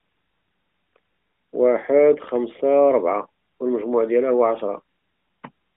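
Nothing goes wrong here technically; the speech simply has the narrow, phone-call sound of an AMR narrowband mobile codec doing its normal job.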